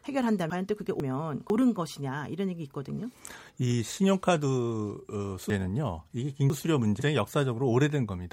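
Chunks out of order occur at 0.5 to 1.5 s, where one 500 ms block plays after its successor, and at 5.5 to 7.0 s, where a block lands two positions late. Nothing is missing, but the jumbled sequence and the three hard joins in each passage produce garbled passages.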